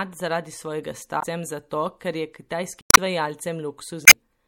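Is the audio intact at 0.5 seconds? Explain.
No. At 0.5 seconds, as throughout the speech, the sound has plainly audible MP3 compression damage, likely from encoding at a low bitrate that fits about 64 kbps. Short of bits, the encoder zeroes weaker frequency lines that flicker on and off between frames, giving a watery, swirly tone with chirpy s sounds and smeared onsets. A spectrogram shows patchy, blinking holes in the frequency content.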